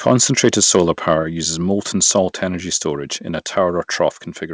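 Right at the start, from 0.06 to 1.14 s, just before "uses molten", you get what sounds like microphone overload, most likely the input gain set too high so the loudest peaks ran into the converter's ceiling, by about 4 dB. The tops of those peaks get flattened, roughly one sample in a hundred, and that gives the strongest syllables a harsh, crackly edge. It's audible through the call path's band, which stops around 8 kHz.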